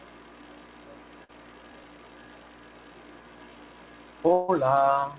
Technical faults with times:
0.41 dropped buffer (overrun)
1.24-1.31 burst of packet loss
1.84 dropped buffer (overrun)
4.33-4.50 long network dropout

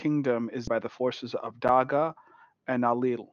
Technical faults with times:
0.67-0.69 skip ahead
0.81-1.58 jitter buffer speed-up

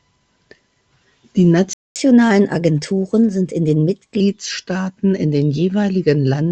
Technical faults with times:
1.73-1.96 playback stall
1.96-4.20 catch-up at higher speed

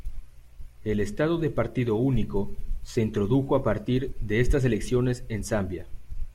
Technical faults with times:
none

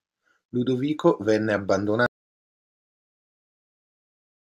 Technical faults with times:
2.06-4.59 audio dropout to silence

